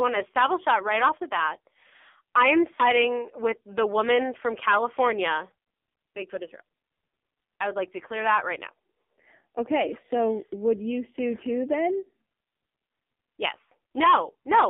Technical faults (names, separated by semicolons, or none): AMR narrowband mobile codec; lost AMR speech frames